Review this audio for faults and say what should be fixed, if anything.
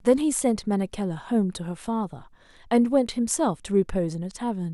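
Nothing needs fixing, because no technical faults can be heard anywhere in this speech recording.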